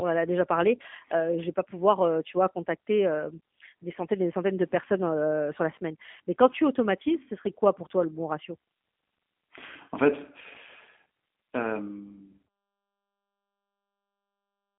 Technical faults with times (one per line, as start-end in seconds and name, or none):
0.00-14.79 G.729 codec